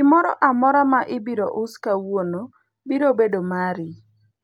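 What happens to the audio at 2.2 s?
Nothing goes wrong at 2.2 s; the speech carries on intact through that moment with no dropout, click or other fault.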